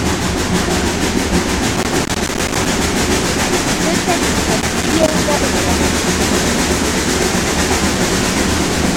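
Two bursts of loose connector crackle occur, from 1.76 to 2.68 s and again from 4.60 to 5.18 s. A worn or dirty contact is making and breaking as it shifts, chopping the signal on and off and adding pops from any DC present. Unlike steady surface noise or evenly spaced digital clicks, the scratching here is irregular and confined to these two bursts, and the sound itself stutters with it.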